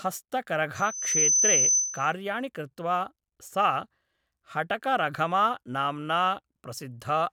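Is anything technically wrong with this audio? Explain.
Yes, there's loudspeaker feedback squeal from about 0.75 to 2.13 s, cutting off just before "कृत्वा सा". The mic is hearing the speaker it's feeding, and at around 6.1 kHz the loop gain tops one, so that frequency keeps feeding itself. You hear a thin, piercing tone swell up over roughly half a second into a steady squeal that sits a few dB above the speech before it drops away.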